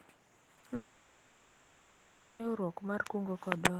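This speech clip suffers short concealed packet loss three times close together: audio packets arrived too late for the decoder, and the receiver patched each gap by extending the preceding sound and then blending back into the real signal. The patches run about 20 ms at 0.45 to 0.49 s, 20 ms at 0.55 to 0.59 s, and 40 ms from 0.59 to 0.65 s, heard as a quick run of brief smears or wobbles. Just after that comes what is likely a long network dropout. Audio stopped arriving for about 1.64 s, from 0.75 to 2.41 s, and the receiver filled that entire stretch with synthesized continuation rather than true silence. The last real sound is drawn out into an artificial buzz or hiss that fades. When the real signal resumes at 2.41 s, the content from the missing 1.64 s is simply gone.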